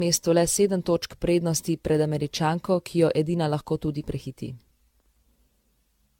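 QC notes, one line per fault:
Throughout, generation loss. The speech sounds swirly and hollow, with a watery smear and consonant onsets that blur. The damage is heavier than a single encode at this quality would leave. The likely cause is repeated lossy coding, around ten passes through an AAC-LC chain near 96 kbit/s. Each pass requantises on a shifted frame grid, so noise and spectral holes pile up across generations.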